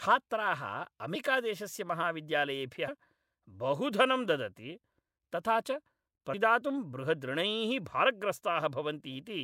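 At 1.14, 2.87 and 6.33 s (the last just after "धनं ददति तथा च"), compressed frames are skipped. About five 24 ms frames never play, so the speech leaps ahead roughly a tenth of a second. Unlike a dropout, no silence appears.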